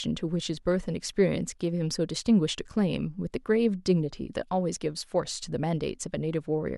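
No faults are audible anywhere in the recording.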